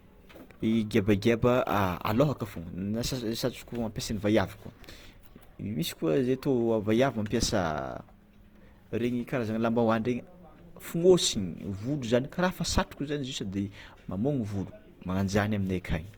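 Opus compression throughout: speech is plainly grainy and rough, likely from Opus music mode near 24 kbps filling starved bands with noise. Content reaches 20.2 kHz.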